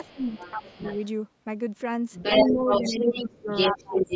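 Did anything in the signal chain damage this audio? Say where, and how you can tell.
Yes. Speech suppressed in double talk at 0.0–0.78 s, 2.45–3.11 s, 3.27–3.48 s and 3.73–4.06 s: the talker's speech dips by roughly 10 to 20 dB while a second voice plays. The likely cause is the call's echo canceller, unable to separate the two, turning everything down.

The other side's voice leaking through at 0.04–1.07 s, roughly 15 dB below the speech, then from 2.12 s to the end, where it is even louder than the talker. This is likely echo from the loudspeaker that the canceller failed to remove from the microphone.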